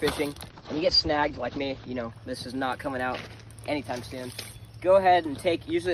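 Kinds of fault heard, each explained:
Call bitrate drop: The call's bandwidth estimate fell, so the encoder had to squeeze the audio into far fewer bits. From 0.52 s to 2.17 s the sound goes coarse and watery, and the top end collapses from 20 kHz to 8 kHz, so it turns muffled. That fits a fall from roughly 48 kbps to about 10 kbps. It sits at its worst for about 1.4 s before clarity returns.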